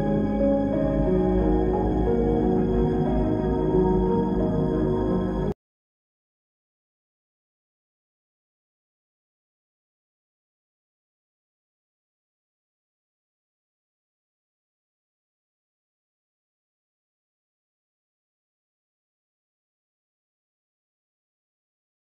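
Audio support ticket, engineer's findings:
No audible faults found; nothing to fix.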